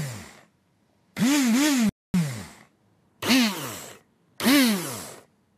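A rebuffering stall runs from 1.89 to 2.14 s. The player exhausted its downloaded audio and paused until more data arrived, so the sound drops to silence for 247 ms, then picks up exactly where it stopped. Nothing is skipped; the pause simply stretches the timeline.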